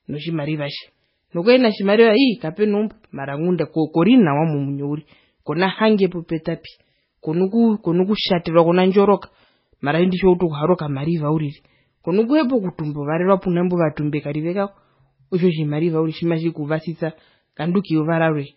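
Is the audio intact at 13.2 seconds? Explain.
No. At 13.2 s, as throughout the clip, the speech shows heavy damage that is likely from MP3 compression at a very low bitrate, around 16 kbps. Everything above 5.5 kHz is cut, and weak frequency lines drop in and out between frames, giving a watery, swirly sound with smeared attacks.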